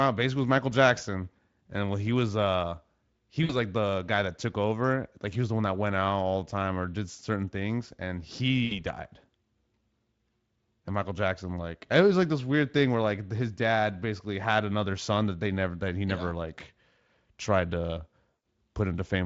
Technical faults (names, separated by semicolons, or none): VoIP packet loss concealed by the speech codec